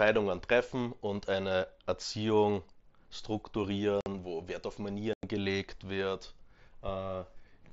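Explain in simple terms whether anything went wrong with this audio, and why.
Yes, the speech drops out twice: from 4.01 to 4.06 s, and from 5.13 to 5.23 s just before "gelegt wird". This is unconcealed Bluetooth headset packet loss. Audio packets between headset and phone went missing, and nothing filled the gaps, leaving abrupt holes of about 50 and 100 ms over the wideband mSBC link.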